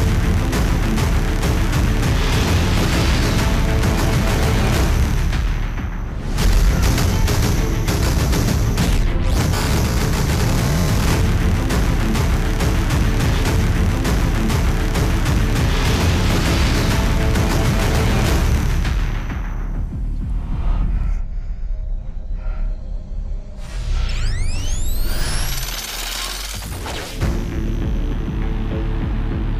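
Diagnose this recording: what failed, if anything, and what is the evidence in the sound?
Overlapping chunks in the buffering or chunked processing stage. Short clicks or stutters land at 3.01, 9.02, 15.03, 21.04 and 27.04 s, about 6 s apart. Each new 6-second chunk starts about 7 ms early, so that sliver plays twice at every join.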